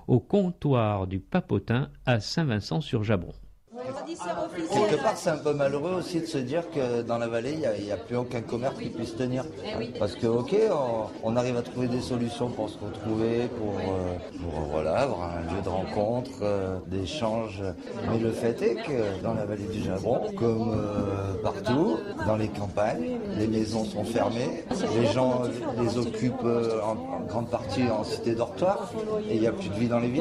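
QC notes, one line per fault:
19.12–23.69 s, call bitrate drop: for about 4.5 s the sound turns coarse and watery, with the top end dulled, which fits the encoder being pushed from around 64 kbps down to roughly 23 kbps after the bandwidth estimate fell. It differs from a plain low-pass filter or packet loss because the sound keeps flowing without gaps or clicks, while the detail smears and thins rather than simply losing treble, then returns to full clarity once the bitrate recovers.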